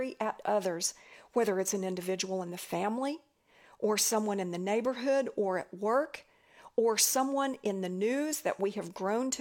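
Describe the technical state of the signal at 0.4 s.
At 0.4 s the signal is intact, with no audible fault in the speech at that moment.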